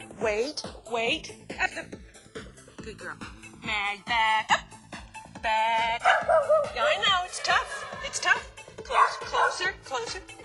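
From the start to the end, the channels drift apart: the two sides run on separate clocks roughly 200 ppm apart, so the delay between them keeps growing, reaching about 2 ms by the close. Summed to mono, comb notches sweep slowly, heard as gradual flanging.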